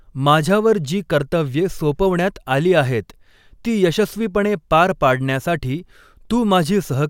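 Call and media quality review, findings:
Nothing stood out on listening to this speech recording.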